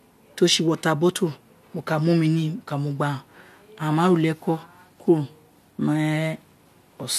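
Nothing in this speech recording stood out as a technical problem on listening.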